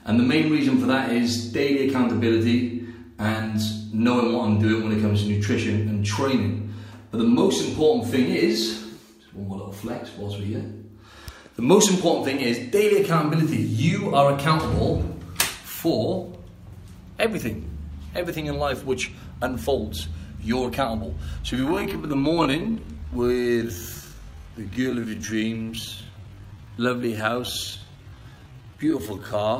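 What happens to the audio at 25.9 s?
At 25.9 s the audio sits inside a time-stretched section running from 21.57 s to the end at 29.59 s, where it plays at about 0.64 times its original pace with pitch unchanged. The likely cause is software lengthening the passage by repeating short grains. It sounds dragging. On a spectrogram, harmonics keep their frequencies but stretch horizontally. The waveform shows slower envelopes and repeated segments.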